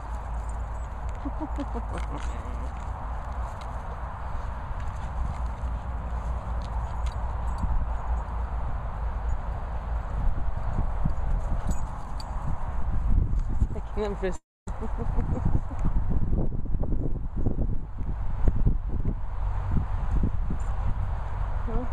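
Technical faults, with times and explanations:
14.35–14.69 s, long network dropout: sound fades into a buzz or hiss, then silence, and 0.32 s is lost. That is far longer than a brief packet glitch, so a network stall is the likely cause.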